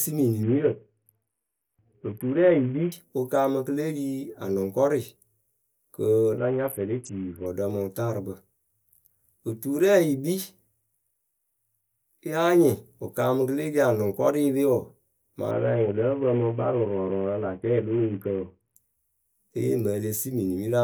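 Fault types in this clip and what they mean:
Bluetooth SBC bit pool drop: on a congested link the encoder starves its sub-bands, so treble dulls and gritty quantisation noise rises at 0.43–2.92, 6.38–7.46 and 15.51–18.76 s, then clears. The grit, absent from a plain low-pass, suggests a bit pool near 5.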